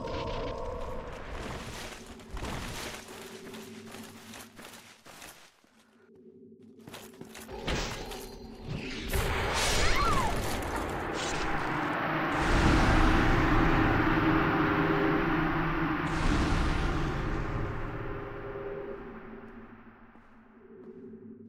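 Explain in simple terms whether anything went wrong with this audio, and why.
Nothing went wrong with this audio that a listener can pick out. The sound carries on steadily from beginning to end, with no moment that stands out as a problem.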